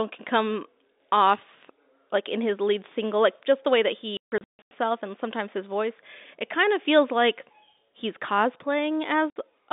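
At 4.17 to 4.71 s the speech breaks up with packet loss filled with silence: about 420 ms dropped in hard-edged gaps, the longest 150 ms, which fits 30 ms packets. A shorter 60 ms hole hits at 9.3 s, over narrow telephone-band G.711 audio.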